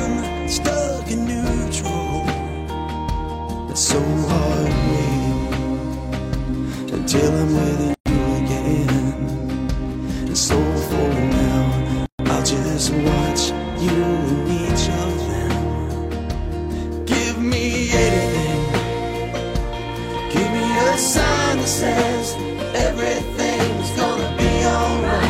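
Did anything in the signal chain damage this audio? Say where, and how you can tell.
Yes. At the codec stage, separately encoded pieces were joined untrimmed, leaving gaps at a join of encoded pieces: silences at 7.94 s (118 ms) and 12.06 s (133 ms).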